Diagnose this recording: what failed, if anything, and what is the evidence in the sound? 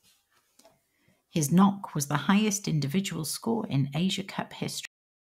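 Cut-off end at 4.85 s: the speech halts mid-sound into digital silence without any decay, unlike a fade, because the final buffers never reached storage.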